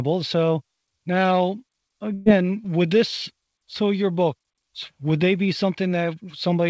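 At 2.14 s a burst of packet loss interrupts the speech, running to about 2.28 s, just before "would this so your". Roughly 120 ms of audio never arrived in time, and the receiver concealed the gap for about 116 ms by extending the last sound and letting it decay, so the gap is heard as a brief smeared, fading tail rather than silence. Speech then resumes further on with that stretch missing. The call path's band limit, with nothing above 8 kHz, fits the G.722 codec.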